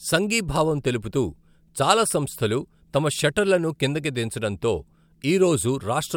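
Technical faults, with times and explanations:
No technical faults detected anywhere in the speech recording.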